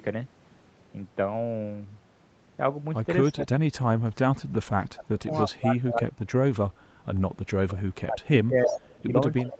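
Speech suppressed in double talk at 3.32 to 4.1 s: the speech sinks by about 35 dB. The likely cause is an echo canceller that could not tell its own talker from loudspeaker echo while both sides spoke, so it turned everything down. It happens again from 4.91 to 6.58 s, with dips of about 30 dB.

Echo leak at 5.32 to 5.43 s: a faint copy of the speech comes back 331 ms late, about 25 dB below it. This is likely a loudspeaker's echo that the far end's canceller failed to remove. A brief scrap follows at 7.72 to 7.78 s, about 20 dB down.

From 7.87 s to the end, double-talk suppression again pulls the speech down by up to about 25 dB. Inside that stretch the echo grows louder, at 8.64 to 9.04 s and 9.37 to 9.54 s, still 331 ms late. The first of these is only about 5 dB below the speech and the second about 15 dB below, both within the call path's band, which stops at 8 kHz.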